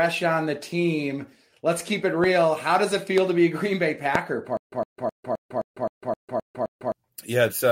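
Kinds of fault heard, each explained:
Loud pop: three single sharp pops at 2.24, 3.18 and 4.15 s, about 10 to 15 dB above the speech, likely from voltage spikes.
Stutter with silent gaps: from 4.57 to 6.92 s, a 110 ms burst repeats nine times every 261 ms with silence between, likely a stalled stream.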